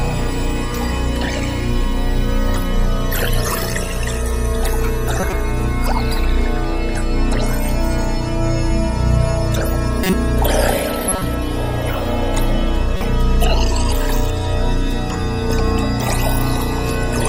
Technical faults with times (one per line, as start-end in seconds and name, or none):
5.19-5.33 corrupt frame decoded
10.03-10.13 corrupt frame decoded
11.09-11.22 corrupt frame decoded
12.95-13.01 corrupt frame decoded